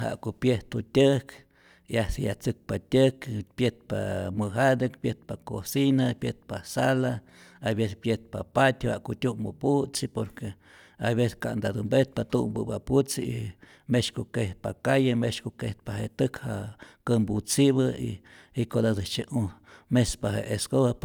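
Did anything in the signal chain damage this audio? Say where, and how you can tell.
No, nothing in this speech recording stood out as damaged on listening.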